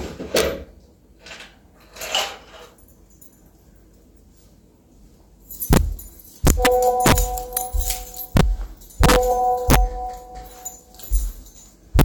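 Integer overflow runs through the whole recording: the signal was pushed about 8 dB too hot, and where it should have been limited at full scale, each peak past the maximum wrapped around to the opposite sign instead. Roughly one percent of samples are affected, so the louder moments of these sounds break into harsh, violent cracks, sharper than clipping. On the waveform, peaks jump from one rail straight to the other; a spectrogram shows bright broadband vertical streaks at each one.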